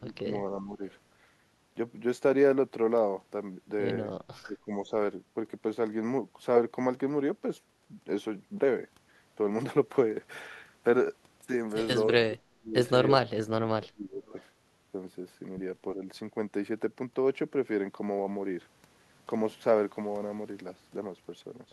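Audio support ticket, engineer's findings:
Speech ducks and chops at 0.0–0.3, 0.57–0.82, 4.45–4.9, 12.28–12.75, 13.11–14.35 and 15.96–16.03 s, deepest near 12.3–14.4 s. Speech suppressed in double talk, likely the far-end echo canceller muting overlapping speech.

Faint delayed repeat at 14.26–14.44 s, 326 ms behind, roughly 35 dB down. Echo leak, likely residual loudspeaker pickup that the canceller missed.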